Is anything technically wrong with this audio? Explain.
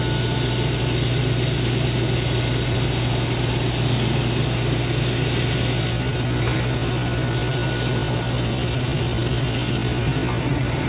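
Yes. From 5.69 s to 10.65 s the sound suddenly drags, running at about 0.69 times its earlier pace while the pitch stays put rather than going deeper. This is likely a time-stretched section, where software lengthened the passage to fit a duration by repeating short slices instead of resampling. The narrow band with nothing above 4 kHz, which fits a G.711 mu-law call path, belongs to the call line, not to this fault.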